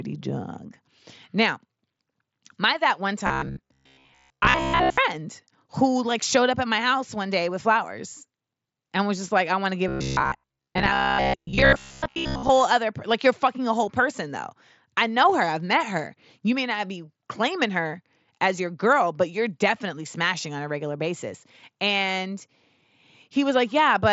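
Speech, heard through a band limit near 7.7 kHz that fits the wideband mSBC Bluetooth headset codec. Robotic sound from repeated short buffers appears twice: 3.27 to 4.98 s after "my that one", and 9.88 to 12.51 s after "I want to give". The voice becomes a rigid metallic buzz at 66.8 Hz. Most of the real audio is skipped. The likely cause is late audio, with the last 15 ms or so replayed over and over to fill the gaps.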